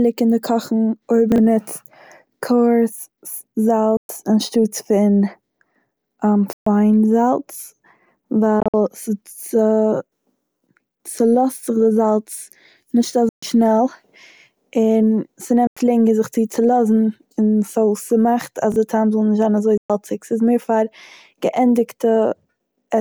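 At 1.32 s there's a quick garbled blip: chunks out of order. A 20 ms slice of the speech lands two slots late, so the order scrambles briefly and hard joins appear. It happens again at 18.72 s, there just one slot late.

From 3.97 s on, the sound drops to silence with abrupt edges and picks up later as if it had kept playing, most likely a Bluetooth dropout where packets missed their deadline. The holes are at 3.97 s (120 ms), 6.53 s (133 ms), 8.60 s (93 ms scattered over 133 ms), 13.29 s (133 ms), 15.67 s (93 ms) and 19.77 s (120 ms).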